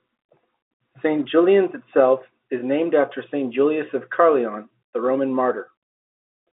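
The speech carries no technical faults; it arrives over an ordinary G.711 telephone line whose narrow band, roughly 200 Hz to 3.7 kHz, gives it the familiar phone-call sound.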